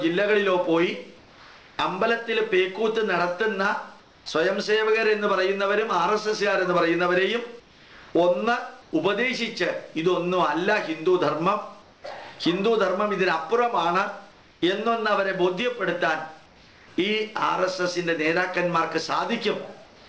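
Comfort noise in place of the background appears at 1.18–1.78, 4.00–4.26, 7.60–8.14, 8.82–8.92, 11.82–12.04, 16.46–16.88 and 19.86–20.08 s. In these pauses the real background gives way to a steady, featureless hiss up to about 3 dB quieter, likely from discontinuous transmission. On a spectrogram these stretches show as smooth, uniform patches, most of them slightly dimmer. Throughout the clip, energy stops at 8 kHz, which fits a G.722 call path.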